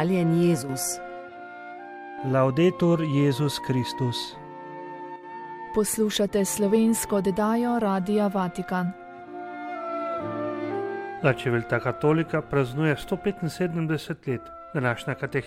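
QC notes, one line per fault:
0.63–0.69 s and 5.16–5.23 s, one channel drops out: the sound briefly sinks by about 6 dB for roughly 70 ms each time, then snaps back to full level. The dips are abrupt, not faded, which makes them read as short holes rather than level riding. The likely cause is one stereo channel cutting out. Once the channels are summed to mono, material shared by both loses half its contribution, and anything carried only in the missing side vanishes.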